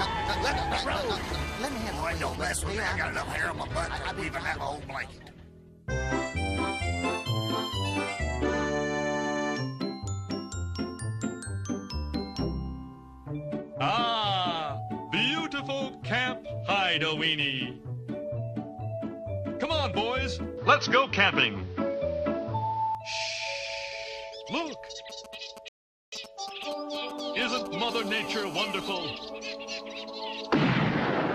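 A hard, raspy buzz sits under the sound from 1.15 to 2.36 s, pitched at about 217 Hz and thick with harmonics, around 13 dB below the signal. This is GSM phone buzz: a nearby 2G handset in a call, its radio bursts rectified by the audio circuitry.

From 20.57 to 22.95 s the sound turns dull and boxy, with nothing above 6.3 kHz, a level shift of roughly 5 dB and a new noise floor some 30 dB down, without any gap at the change. The likely cause is the input switched to a poorer device with a narrower band and its own noise.

From 25.10 to 27.91 s a galloping dit-dit-dit of brief 217 Hz buzzes appears, roughly 15 dB below the signal. These are GSM signalling bursts, short groups of transmissions from a nearby phone, picked up and rectified by the audio path.

At 25.68 s, within those bursts, the audio drops to silence and picks up exactly where it stopped at 26.12 s, adding 0.44 s to the running time. 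This is a rebuffering stall: the player exhausted its downloaded audio and waited for more.

At 27.91 s, as the bursts end, the steady 217 Hz buzz returns at about 13 dB below the signal and lasts until 28.94 s. This is GSM phone buzz again, the phone's continuous call transmission rectified into the audio.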